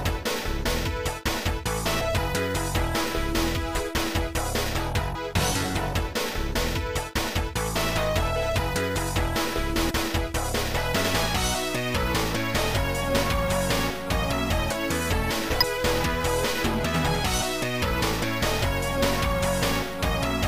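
At 2.00 s, 9.89 s, 13.21 s, 15.61 to 15.63 s and 17.39 s the audio has brief glitches from damaged data in a compressed stream, each lasting 20 ms or less. Corrupted bytes in the encoded file make the decoder misread or discard those frames and hunt for the next valid header, leaving a chirp, squawk, click or short hole. Unlike a simple clipped transient or a playback buffer dropout, these are decoder errors on a few corrupted frames.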